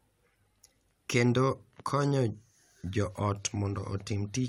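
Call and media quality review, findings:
Nothing stood out on listening to this speech clip.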